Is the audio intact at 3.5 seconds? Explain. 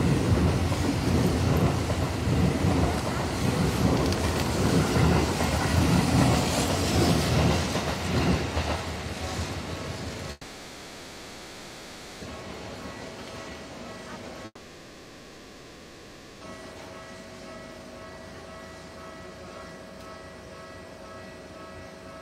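Yes, at 3.5 seconds the audio runs cleanly with no dropout, click, distortion or other technical fault.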